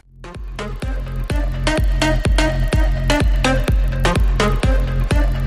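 From start to finish, a faint buzz ticks at a steady 25 Hz. It fits a resampler restarted on every block, probably converting 24 kHz to 48 kHz in 40 ms chunks and leaving a small error at each edge. Unlike mains hum, it stops whenever the sound does, and unlike dropouts, no audio goes missing.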